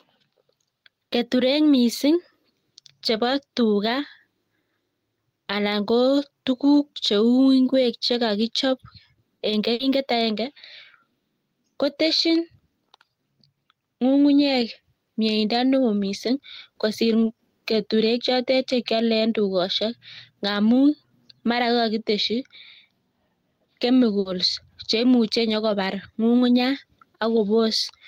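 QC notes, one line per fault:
throughout: gain pumping. Input gain is set too high and a fast limiter or compressor is likely pulling it down on each loud syllable. The background swells between phrases and ducks under speech by about 5 dB, squashing loud and soft parts together.
9.73–9.82 s and 24.19–24.28 s: burst of packet loss. Several packets in a row failed to arrive in time, so the receiver extended the last sound for about 60 ms, fading it into a held buzz or hiss, then resumed with about 60 ms of speech skipped.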